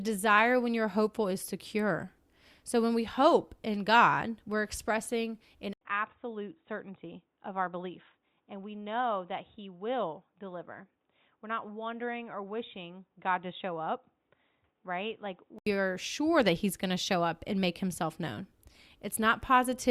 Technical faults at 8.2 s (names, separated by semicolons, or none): input switched to a poorer device